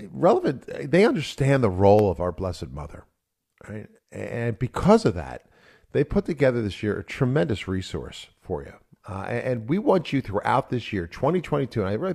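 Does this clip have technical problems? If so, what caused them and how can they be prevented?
No, there's nothing wrong with this speech recording technically, so there's nothing here to trace back or guard against.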